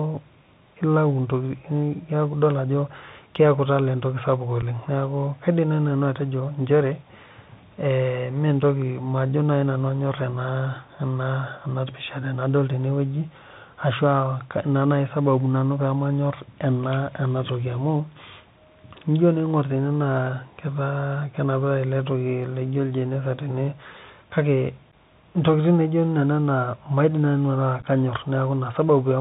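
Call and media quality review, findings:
Bluetooth CVSD headset codec, whole clip: speech band-limited to 4 kHz, scratchy sibilants, granular hiss under the speech, distortion on loud bright passages. Cause: sound consistent with a 64 kbps CVSD link, where the 1-bit delta modulator's adaptive step lags fast high-frequency swings.

Unconcealed Bluetooth headset packet loss, three events with abrupt gaps. At 4.62 s, after "keeku etala entoki sapuk": 7.5 ms hole, about two packets. At 24.92 s: 11.2 ms hole, a few packets. From 27.81 s, after "nanu ataa": 22.5 ms lost across 37.5 ms (longest run 11.2 ms), several packets, chopped crackle. Cause: dropped headset-to-phone voice packets replaced by silence or idle fill, with no concealment. Speech returns briefly quieter as CVSD's step size rebuilds.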